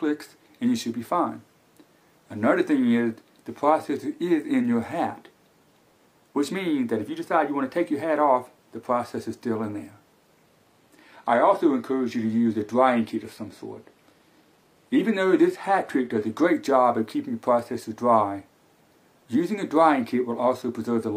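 At 10.47 s the sound abruptly loses its top end and takes on a thinner, synthetic sheen. This is the adaptive stream dropping to a lower bitrate for six seconds, until 16.47 s, when full quality returns just as suddenly. Nothing reaches above 14.9 kHz in that stretch, and the texture fits a step down from about 96 kbit/s AAC to 24 kbit/s HE-AAC. Unlike a buffering stall, playback never pauses or skips.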